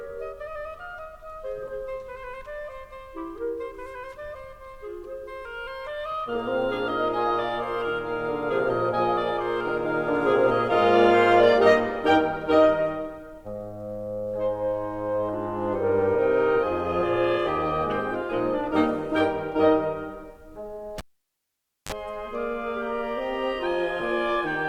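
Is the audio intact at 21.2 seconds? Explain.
No. At 21.2 seconds the music falls inside a cable pulled and plugged in fault spanning 20.98 to 21.92 s. A live cable comes out with a pop, leaving near silence for about 0.89 s. As it is pushed back, the tip connects before the ground, so a 35 ms burst of 50 Hz mains buzz breaks through. A second pop follows as the music returns.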